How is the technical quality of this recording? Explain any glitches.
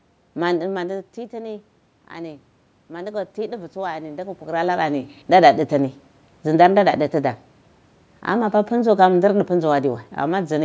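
The one glitch is automatic gain rising, from 0.6 to 5.16 s. Around 0.5 s the talker moves back and the level at the microphone drops by about 14 dB. The gain control reads this as a quiet input and raises its gain by about 7 dB over several seconds. The voice and the room noise swell together, so the background gets louder along with the speech. That doesn't make up for the whole drop. The talker shifts again near 4.5 s.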